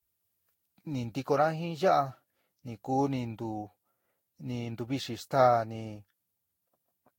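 Generation loss runs through the whole speech clip, most likely from the audio being decoded and re-encoded with a lossy codec about five times, with a character that fits Vorbis at around 60 kbit/s. Each pass quantises again on a shifted frame grid, so noise and spectral gaps pile up. The sound is swirly, smeared and hollow beyond what that bitrate alone would give, attacks are blurred, and nothing remains above 16.6 kHz.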